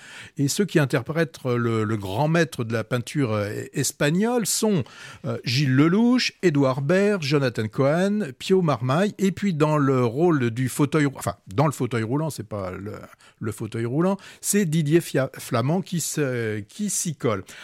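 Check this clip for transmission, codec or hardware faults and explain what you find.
No faults turn up anywhere in this speech recording.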